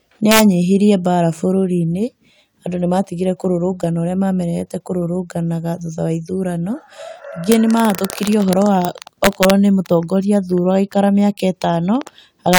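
Integer overflow cracks hit this speech at 0.31–0.40 s, around 7.52 s, 7.95–8.85 s, 9.24–9.50 s and 12.53–12.59 s. Loud peaks pushed about 1 to 4 dB past full scale and wrapped to the opposite sign instead of limiting, so you get harsh, violent snaps rather than clipping fuzz.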